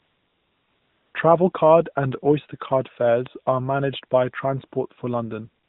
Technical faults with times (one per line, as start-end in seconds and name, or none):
0.00-1.14 AMR comfort noise
1.52-1.54 AMR comfort noise
3.26 bit error spike
5.64-5.68 AMR comfort noise